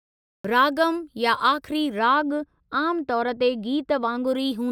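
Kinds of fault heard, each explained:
Cut-off start: The capture began late, so the first 0.45 s is pure digital silence and the speech then appears abruptly at 0.45 s, already partway into a sound, with no natural onset or fade-in. On a waveform this shows as a flat line that jumps straight to signal. A spectrogram shows an empty block before the first column of energy, which starts with a hard vertical edge rather than building up.
De-emphasis applied wrongly: A treble roll-off intended to reverse pre-emphasis was applied where none was needed or applied twice, so from 1.99 s to 4.27 s the high end slopes smoothly downward, reaching about 13 dB below the 1 kHz level at 10 kHz. The speech becomes dull and muffled, with softened sibilants. On a spectrogram the upper bands grow progressively weaker toward the top over that span. The waveform looks rounder and less spiky, with little visible change in overall level.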